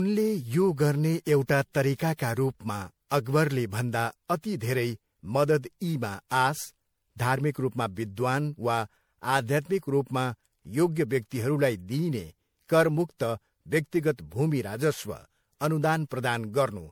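Throughout, the speech sounds swirly, smeared and hollow, with blurred attacks. This is likely generation loss, from roughly seven MP3 passes at around 96 kbit/s.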